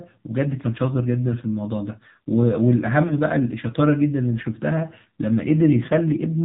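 Throughout, the AMR narrowband mobile codec cuts everything above 4 kHz and gives the speech a plainly buzzy, synthetic edge, consistent with roughly 7.4 kbps AMR-NB. From 3.08 to 3.14 s, lost AMR speech frames cause a brief dip or warble as the decoder repeats its last settings at lower gain, fitting one missing 20 ms frame.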